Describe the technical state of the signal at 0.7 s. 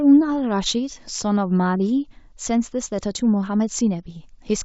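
At 0.7 s the speech is intact, carried through G.722 wideband telephone coding at 64 kbit/s, whose effect is at most faint.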